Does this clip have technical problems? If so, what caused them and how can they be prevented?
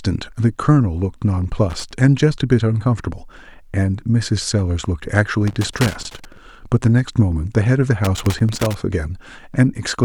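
Yes. Loose connector crackle appears at 1.70–1.92 s, 5.48–6.37 s and 8.05–8.74 s: irregular bursts of scratchy crackle over the speech, from a worn or dirty contact intermittently making and breaking, chopping the signal. Cleaning or replacing worn plugs and securing cables against movement would prevent it.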